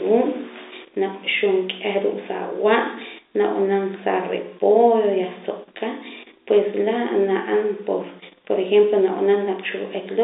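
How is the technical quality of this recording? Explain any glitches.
No glitches are audible anywhere in this recording.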